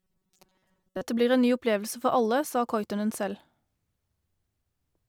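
From 0.01 to 1.02 s the speech takes on robotic sound from repeated short buffers: a rigid, metallic buzz at 188 Hz that loosely tracks the words. Most of that stretch is repeated audio, likely from a segment of about 5.3 ms being looped while fresh audio arrived too slowly.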